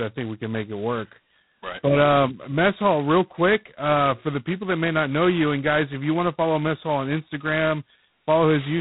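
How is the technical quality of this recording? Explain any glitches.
The technical quality is poor, with heavy codec damage throughout the speech. G.726 ADPCM coding, likely at its 16 kbit/s rate, leaves a harsh, rasping hiss tracking the speech level, with nothing passing above 3.9 kHz.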